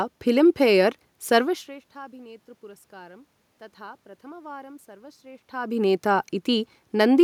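No technical faults are audible.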